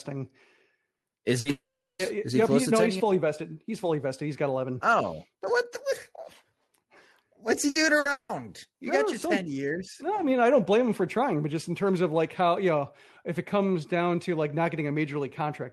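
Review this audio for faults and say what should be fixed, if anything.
Burst of packet loss occurs four times: 0.97–1.06 s, 1.39–1.48 s, 7.69–7.78 s (right after "what's he") and 7.99–8.08 s. Each time, about 60 ms of speech is lost. The receiver fills the hole by extending the preceding sound and fading it, so a brief buzz or hiss replaces the missing piece and the speech picks up slightly later. Unlike a dropout, each gap is short and never reaches silence. Adding forward error correction and a slightly deeper jitter buffer would help prevent this.

Long network dropout occurs at 1.51–2.02 s, before "is he yep close", and again at 8.11–8.32 s, both likely caused by the network link stalling. In the first, about 480 ms of speech is missing. The concealment buzz dies away, leaving about 380 ms of plain silence. The second loses about 180 ms and fades to silence only at its very end. The concealment decaying into real silence separates these from the short bursts, whose fill never empties out. 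Preventing this means stabilising the connection, for example by moving off a congested or weak wireless link.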